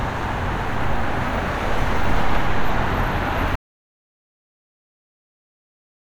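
The input feed was likely lost at 3.56 s, with the recorder continuing to write silence, so an audio dropout to silence begins there: the sound cuts off abruptly mid-flow and gives way to silence, no room tone at all, lasting through to the end.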